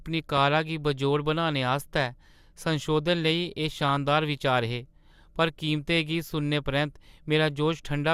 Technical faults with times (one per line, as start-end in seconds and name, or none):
3.73-3.97 DAB burbling